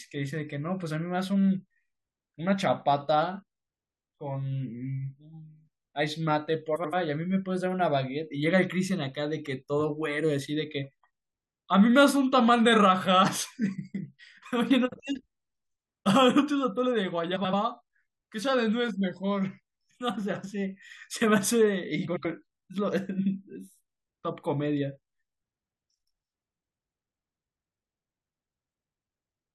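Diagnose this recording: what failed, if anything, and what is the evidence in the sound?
Network stage, frames out of order: at 6.76–6.94, 17.36–17.53, 22.07–22.25 and 27.81–27.98 s the speech flutters as two roughly 85 ms blocks play swapped. Unlike dropouts, no time is lost.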